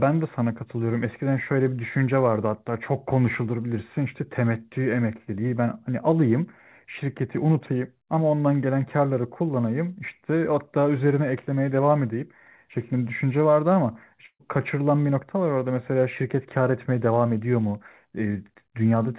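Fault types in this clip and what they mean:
Burst of packet loss: at 14.26 s the speech freezes into a held, fading sound that sinks into silence, then skips ahead because 140 ms of audio was lost or came too late.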